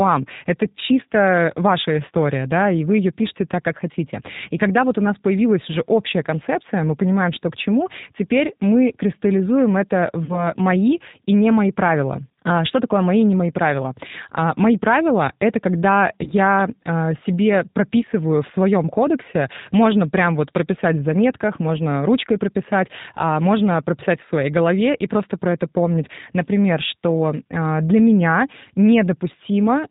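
Throughout the speech, the G.729 codec is plainly audible. The band stops at 4 kHz, and the voice has the rough, synthetic grain of a coder that rebuilds each 10 ms frame from a vocal tract filter, a pitch predictor and a handful of pulses rather than the waveform itself. The sound fits the 8 kbit/s G.729A variant.

From 10.25 to 10.49 s, between "теперь мы кристаллизуем это" and "мои и не мои", there is VoIP packet loss concealed by the speech codec. About 40 ms of audio went missing, which points to two lost packets. The decoder filled the gap by extending its last pitch and filter settings with falling gain, and because each frame depends on the one before, the disturbance lasts past the gap itself. A second, shorter loss of 20 ms, consistent with a single packet, falls from 16.24 to 16.30 s, between "это когда" and "а себе прописываю в", and is concealed the same way.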